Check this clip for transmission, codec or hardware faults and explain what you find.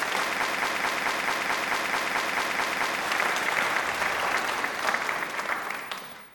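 There's one clear fault here, a broken-record loop. From 0.43 s to 3.01 s, a chunk of about 0.22 s plays over and over, 12 times back to back, each repeat identical. It sounds like the audio got stuck and stutters in place before carrying on. The likely cause is a stall in the player, encoder or stream, which kept re-sending the last fragment it had buffered. Whatever should have played during those seconds is gone.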